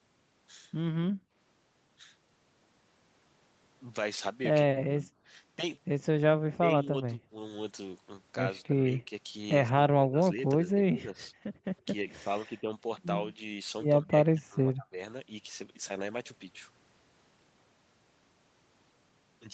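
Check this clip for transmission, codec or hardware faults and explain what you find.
Two echo-canceller faults are present: a brief gating of the background near the start, and repeated suppression of the speech when both sides talk at once. The call path's top end stops at 8 kHz, which fits a wideband Opus link.

Background gated by the echo canceller, 1.11 to 1.33 s: The room tone falls away for about 0.2 s, dropping by about 28 dB before returning. The canceller saw loudspeaker activity and cut the microphone gain hard, so the ambient bed vanishes abruptly and then snaps back when the gate releases.

Speech suppressed in double talk, at 4.67–5.09, 6.59–7.32, 8.67–9.11, 9.69–10.44, 10.62–11.18, 12.46–12.70 and 14.02–14.99 s: The talker's level sags in each window, by roughly 10 dB in the milder ones and as much as 30 dB at 4.67 and 14.02 s. The affected stretches last from a fifth of a second to about seven tenths of a second, and the speech sounds ducked or chopped. 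The likely cause is the canceller failing to tell near-end speech from far-end echo during overlap and attenuating both.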